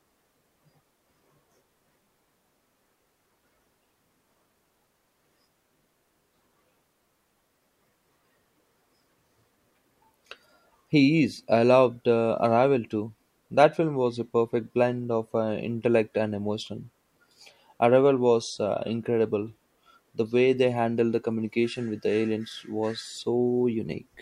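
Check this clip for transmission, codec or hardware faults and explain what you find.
Nothing turned up when listening through this speech recording, so there's no fault to point out.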